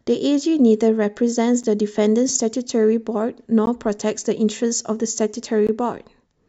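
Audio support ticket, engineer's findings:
Hard-edged silent dropouts at 1.63, 3.66 and 5.67 s, roughly 9, 15 and 18 ms long, spaced about 2 s apart. Gap between stream segments: timestamps of consecutive 2 s segments don't abut, so the player pads with silence.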